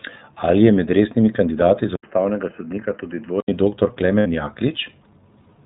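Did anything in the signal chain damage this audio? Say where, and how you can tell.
Yes, at two points in the chain. Throughout the clip the speech sounds muffled and band-limited, with nothing above 4 kHz, and it has a plainly audible rough, slightly synthetic texture. That is the iLBC codec at the codec stage. It squeezes speech into a narrowband channel and encodes each frame's excitation independently. The roughness fits its 13.33 kbps mode with 30 ms frames.

At the network stage there are lost iLBC frames from about 4.20 to 4.26 s. The speech stops moving forward and becomes a held, faintly buzzy vowel, then snaps back to normal straight away. Roughly 60 ms of audio is missing, which fits two dropped 30 ms frames. The decoder filled the hole by repeating the last pitch cycle mixed with noise. Because each iLBC frame stands alone, recovery is immediate once packets resume.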